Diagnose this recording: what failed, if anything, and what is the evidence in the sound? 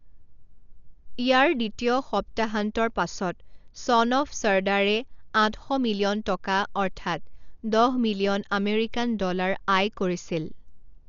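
The codec stage is where this went wrong. Across the whole speech recording the top end is simply gone, with nothing above about 6.9 kHz, so it sounds dull and boxed-in, and there's a rough, fluttery grain riding on the voiced sounds. That's heavy damage consistent with Dolby Digital compression, likely run at a starved bitrate, which fits something around 48 kbps. The encoder cut the band and left many frequency lines without mantissa bits, so the decoder filled them with dither noise.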